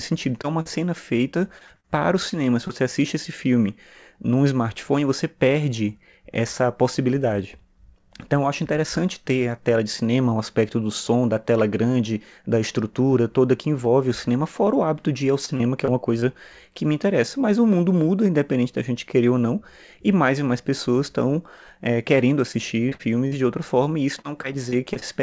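Short concealed packet loss appears at 0.42 s, just before "é uma", then at 0.61–0.67 s, 2.30–2.34 s after "para o", and 2.68–2.71 s. In each case 20–40 ms of audio arrived too late and was patched by extending the preceding sound, leaving a brief smear or wobble.

Repeated packet loss (robotic sound) occurs at 1.31–1.86 s, 15.45–16.24 s (between "hábito de ir ao" and "que me interessa"), 22.52–23.33 s and 24.21–25.03 s. Each stretch has four or five gaps of up to 59 ms, concealed in quick succession, so it sounds choppy. The G.722 call path limits everything to below 8 kHz.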